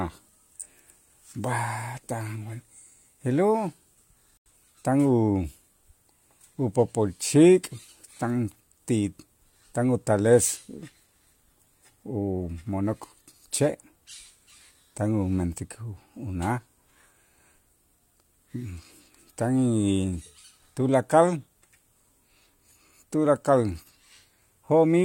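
A digital broadcast dropout interrupts this speech recording: the receiver lost valid frames, most likely because they failed their checksum, and muted the output until clean data resumed. At 4.38 s the sound drops to silence and returns at 4.50 s, a gap of about 0.13 s. The length of the hole fits two missing frames, roughly 85 ms of programme, and what was broadcast during it is gone rather than delayed.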